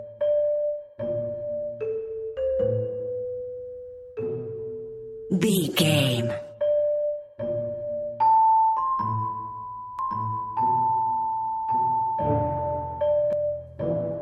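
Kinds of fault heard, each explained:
Doubled audio track: from 9.99 to 13.33 s a full-band copy of the sound trails roughly one second behind, around 5 dB quieter, dry and without decay, starting and stopping abruptly; likely a second, slower capture path mixed in alongside the original.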